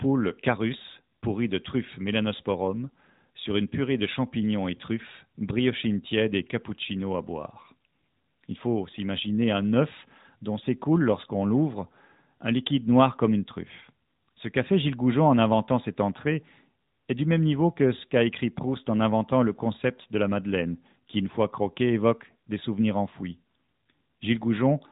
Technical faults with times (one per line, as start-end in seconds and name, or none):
0.00-24.91 AMR narrowband mobile codec